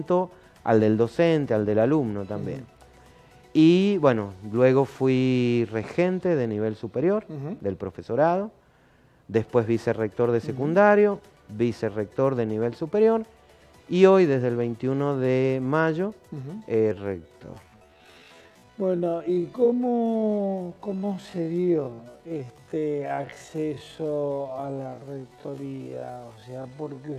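From 16.9 s to the end, a time-stretched section plays at half speed while the pitch stays unchanged. The sudden slowdown makes the sound drag. The likely cause is software stretching the audio to fill a longer duration by repeating short pieces. On a spectrogram, harmonic bands keep their frequencies but each event lasts twice as long, with repeated striations; the waveform envelope looks drawn out and blurred.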